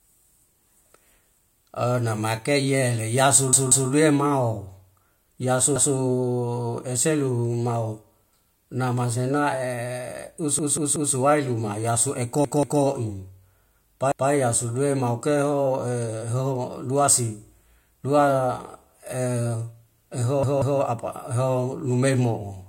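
At 3.53–3.90 s, 5.76–5.94 s, 10.59–11.15 s, 12.45–12.82 s, 14.12–14.30 s and 20.43–20.81 s, the speech hits a repeated buffer: late data makes a roughly 186 ms piece (fitting an 8192-sample buffer) play again one to three times, with hard joins. Unlike a dropout, there's no silence and no speech missing, just a stutter.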